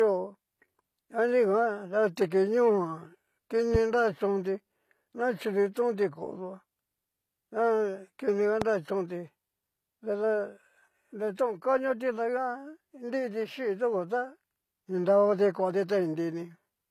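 Throughout the speech there is a hard ceiling at 14.9 kHz and a swirly, thin quality: low-bitrate audio saved at a high bitrate, likely a low-rate encode (fitting roughly 24 kbit/s HE-AAC) re-saved as MP3. A spectrogram shows an empty band above the cut-off and smeared, blocky detail below it.

At 3.75–3.77 s a single loud pop, about 10 dB above the speech, sits over the sound, which continues underneath. It is likely a voltage step from a plug, switch or static. On a waveform it is a brief spike, and on a spectrogram a thin vertical line across all frequencies.

At 8.62–8.64 s a second single pop, about 15 dB above the speech, has the same sharp character and likely the same kind of cause. It shows as a taller spike and another full-band vertical stripe.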